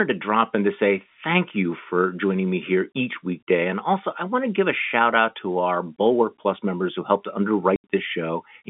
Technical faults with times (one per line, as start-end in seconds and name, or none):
7.76-7.84 packet loss filled with silence